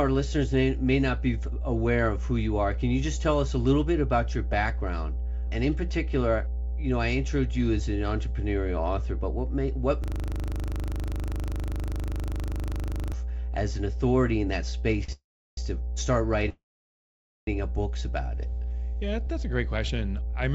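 A steady low 60 Hz tone with some low harmonics runs under the whole recording, at about the same level as the speech. This is mains hum: a ground loop or a nearby transformer has coupled the power line into the signal path.

From 10.04 to 13.13 s, right after "but what may what", a buzz replaces the speech. A 40 ms scrap of audio repeats exactly, about 77 times at a 25 Hz rate, until the speech resumes with "as an authority in". This is a system hang loop: the computer or driver froze while the sound hardware kept replaying the same 40 ms of its ring buffer.

At 15.04 to 15.10 s a sound is held too long, with a slight buzz or dip, before the speech continues with nothing lost. This is a short stall from a late packet. The jitter buffer ran dry, so the receiver stretched the last sound by 45 ms until the missing packet arrived.

Just after, from 15.12 to 15.59 s, the sound trails off into a fading buzz or hiss and then about 340 ms of silence, then carries on where it stopped. 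A second, longer gap runs from 16.49 to 17.49 s, after "to start", with about 850 ms of silence before "a books about it". Both are call audio freezes. The likely cause is packets held up in transit, which emptied the jitter buffer. The receiver filled the wait with a decaying continuation and then silence, adding roughly 0.45 s and 0.98 s of delay without dropping any speech.

From 18.94 to 20.35 s, after "a books about it" and up to "I remember the", the speech sounds hurried but keeps its pitch, running at 107% speed. This is jitter buffer speed-up. Having built up extra delay, the receiver trimmed many tiny pitch-period slices, about a tenth of a second in total, to catch up. Throughout the clip there is no content above 8 kHz, as expected from the G.722 call codec.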